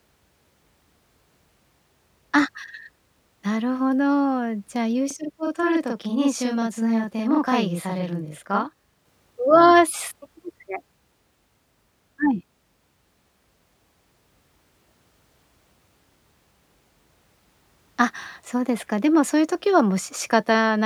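Speech with a channel delay (doubling) from 5.11 to 9.05 s: one channel arrives 40 ms late and is summed to mono, so each syllable doubles, showing paired transients and fine comb notches.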